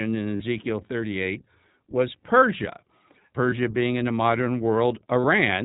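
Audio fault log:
throughout: iLBC codec, band-limited at 4 kHz so the spectrogram shows an empty top, with rough, synthetic texture fitting a 15.2 kbps mode with 20 ms frames.
0.36–0.42 s, 3.50–3.54 s, 5.20–5.25 s: lost iLBC frames, about 40, 20 and 40 ms gaps filled by a repeated, noisy pitch cycle that sounds buzzy and shows as smeared, repetitive harmonics before an abrupt recovery.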